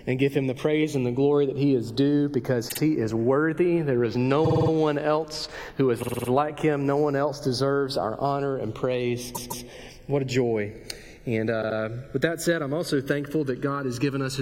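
Throughout, the channels drift apart: separate clocks, roughly 100 ppm off, let the inter-channel delay creep toward under a millisecond, so mono sums flange slowly rather than holding a fixed comb. Repeated frames stutter identical chunks at 2.68, 4.43, 6.02, 9.34 and 11.61 s, each replaying a 52 to 157 ms block and lengthening the audio, not dropping it.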